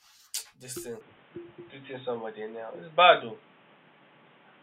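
From 1.01 s, after "this thing", the speech turns boxy, likely an input switched to a poorer device; the spectrogram goes blank above 3.8 kHz.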